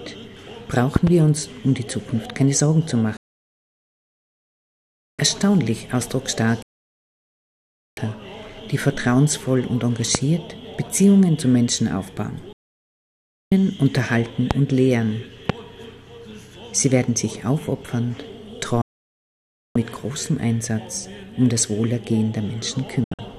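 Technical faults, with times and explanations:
0.96–1.10 s, loud pop: likely a sudden voltage step or pulse, heard as two sharp pops in quick succession about 20 dB above the sound, which carries on underneath.
3.17–5.19 s, digital broadcast dropout: the receiver lost valid frames and muted, so the sound fades out within 3 ms and about 2 s of programme is simply missing.
6.62–7.98 s, digital broadcast dropout: reception failed again and the decoder muted, giving a quick 3 ms fade into a silent hole of about 1.3 s before the sound resumes.
10.15–10.17 s, loud pop: likely a brief electrical pulse entering the chain, heard as a single sharp pop about 20 dB over the sound.
12.53–13.52 s, digital broadcast dropout: corrupted or missing frames made the receiver mute, so the sound drops out quickly and roughly 1 s is lost.
14.51–14.53 s, loud pop: likely a momentary voltage glitch, producing one sharp pop about 20 dB louder than the surrounding sound.
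15.50–15.52 s, loud pop: likely another short electrical pulse, again a single sharp pop about 20 dB above the sound.
18.82–19.76 s, digital broadcast dropout: the signal was lost and output muted, cutting the sound with a 3 ms fade and removing just under 1 s.
23.04–23.19 s, digital broadcast dropout: marginal reception let some frames through, so the sound breaks into several short holes over about 144 ms, the longest about 72 ms.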